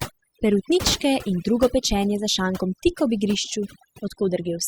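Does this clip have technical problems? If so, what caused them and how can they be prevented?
Yes. Overdone noise removal runs through the whole speech clip. Bands near the noise estimate are cut hard, taking quiet parts of the voice with them and leaving twinkling specks in near-silent gaps. Set the noise reduction gentler.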